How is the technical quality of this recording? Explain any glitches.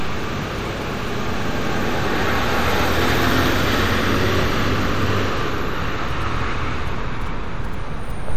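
The recording has one fault across its whole length, likely MP3 compression at a low bitrate that fits a 64 kbps encode. Starved of bits, the encoder zeroes weak frequency lines frame by frame and cuts the top at 20.5 kHz, leaving plainly audible watery, swirly artefacts and smeared attacks.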